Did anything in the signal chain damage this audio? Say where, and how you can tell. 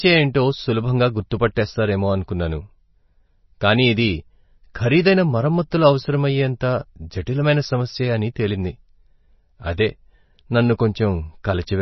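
Yes. The damage is at the codec stage, with MP3 compression running through the whole clip, likely from an encoder starved of bits. Nothing remains above about 5.9 kHz, so the speech sounds dull and watery, with swirly, metallic sibilants. A spectrogram shows a hard, flat ceiling at 5.9 kHz and speckled holes below it where weak frequency lines drop in and out from frame to frame. Damage this heavy points to a very low bitrate, around 24 kbps.

At 1.55 s there is a pre-echo, also from the codec. A sharp onset fell late in a transform block, and the encoder spread quantisation noise scaled for that loud attack across the whole block, including the quiet moment before it. You hear a brief hiss about 13 ms ahead of the attack, and the attack loses its edge. On the waveform a thin, fuzzy noise floor rises just before the transient. The spectrogram shows a broadband smudge leading it.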